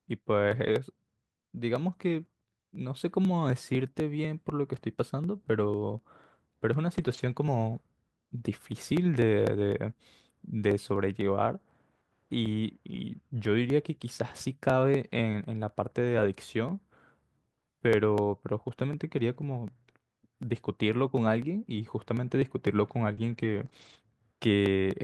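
From 0.27 s to the end, periodic USB or driver dropouts skip a sliver of audio every 0.25 s, giving evenly spaced ticks only while speech sounds, unlike one-off network losses. At 0.47 to 0.73 s, 6.97 to 7.31 s, 16.01 to 16.27 s, 23.17 to 23.67 s and 23.73 to 23.95 s, each lost packet was rebuilt from error correction: no gap, just rougher, noisier stretches. At 23.13 to 23.19 s and 23.69 to 23.73 s, short concealed packet loss continues the preceding sound, heard as a brief smear rather than that grainy roughness.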